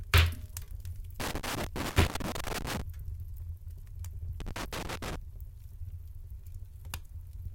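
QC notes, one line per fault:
1.20–2.82 s and 4.40–5.16 s: loose connector crackle. Two irregular bursts of scratchy crackle, the first about 1.6 s long and the second about 0.75 s, break up the audio. A worn or dirty contact in the signal path is opening and closing rapidly as it shifts, chopping the signal into fragments, while any DC present on the line turns each make or break into a pop. That is why the bursts sound ragged rather than steady.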